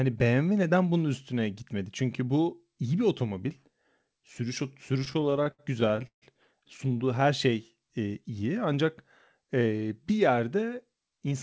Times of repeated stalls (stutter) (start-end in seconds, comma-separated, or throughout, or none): 5.00-6.24